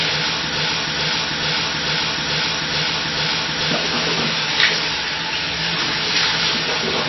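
From the start of the clip, MP3 compression has left plainly audible damage. Nothing is present above 5.8 kHz, so the top end sounds dull and boxed in, and the remaining detail has a watery, swirling quality as weaker frequency components drop in and out between frames. Transients smear rather than landing cleanly. The likely cause is an encoder starved of bits, which fits a low bitrate in the region of 24 kbps: it discards the treble outright and sparsely codes what remains.

From 0.56 s to 3.71 s the audio sticks in a broken-record loop. A fragment of about 0.44 s plays back to back, exactly the same each time, seven times over. This is likely a stalled player, encoder or stream that kept resending the last piece it held. Whatever should have played during those three seconds is gone, and the loop ends at 3.71 s.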